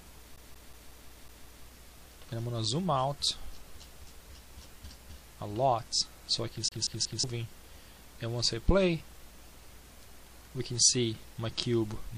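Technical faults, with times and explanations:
0.36 to 1.65 s, CD stuck on one turn: the same 0.18 s slice of sound repeats seven times, each jump marked by a tiny mute, as a scratch knocks the laser back one track every revolution.
6.68 to 7.24 s, CD stuck on one turn: the same 0.18 s loop returns for three repeats, giving that quick, even skipping-disc stutter again.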